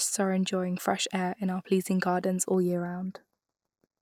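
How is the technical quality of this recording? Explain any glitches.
The speech has one fault. From 2.54 s to the end, channel delay (comb filtering): one channel trails by a fraction of a millisecond, so the mono sum cancels around 3 kHz, sounding hollow and phasey.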